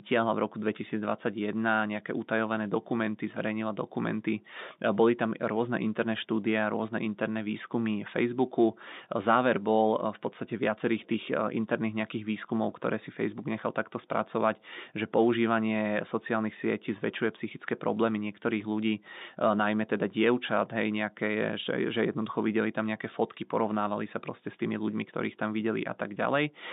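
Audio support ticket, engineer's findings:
No faults found on the speech; band limited to about 150 Hz to 3.7 kHz, consistent with a normal G.711 telephone link, nothing to action.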